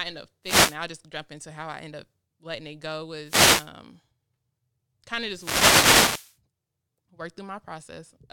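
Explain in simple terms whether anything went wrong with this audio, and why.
Three wireless microphone noise hits break up the speech: 0.43–0.78 s after "end up", 3.23–3.71 s after "up letting it go", and 5.27–6.38 s after "kind of". Each time, radio reflections briefly cancel the microphone's signal, so receiver hiss rises into a burst of static.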